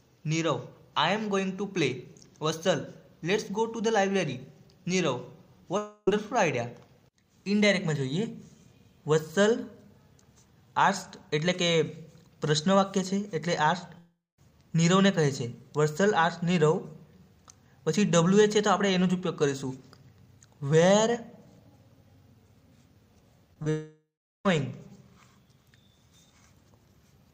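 The audio has three gaps, at 5.77 to 6.08 s, 13.98 to 14.39 s and 23.70 to 24.46 s, each likely a long network dropout. In each, the last sound is stretched into a fading buzz or hiss, and the audio resumes later with the missing portion simply gone. The first gap, about 0.3 s, is almost entirely filled. The second, about 0.4 s, decays into roughly 0.2 s of silence. The third, about 0.76 s, ends in roughly 0.4 s of silence. That audible decay to nothing marks them as dropouts. Just before the third gap there is a cluster of short concealed packet loss at 23.54 to 23.57 s, 23.63 s and 23.64 to 23.67 s. Each is a hole of about 10 ms that the decoder patched by extending the preceding sound and blending back in. These are heard as brief smears or wobbles rather than gaps, and they never fall to silence, which separates them from the longer dropouts.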